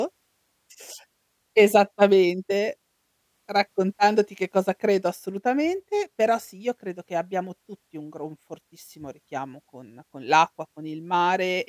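The recorded speech shows no technical faults anywhere in the signal.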